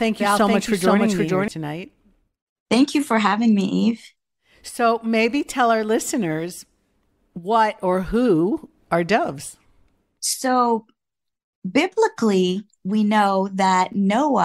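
From the very start of the clip until 1.48 s, the speech is heard twice: a doubled audio track, with a second full-band copy trailing the original by around half a second at roughly the same level. The copy carries no decay or room colour, so it reads as a clean repeat rather than an echo, and it cuts off abruptly at 1.48 s. The likely cause is the same signal being captured again through a slower path, or an edit leaving two copies out of step.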